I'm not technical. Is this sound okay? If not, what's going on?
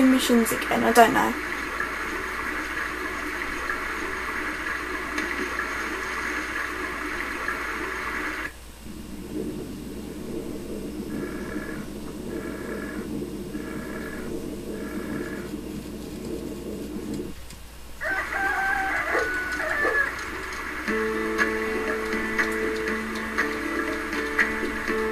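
Yes, nothing faulty is audible; no dropouts, distortion or glitches anywhere in it.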